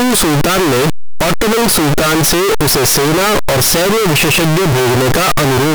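From the first moment to the last, the speech is buried in loud, harsh distortion, and soft sounds are as loud as the strong ones. The fault is likely signed and unsigned mixed up in the 8-bit samples: flipping the top bit turns every zero crossing into a jump across the full range, so near-silence becomes near-maximum level.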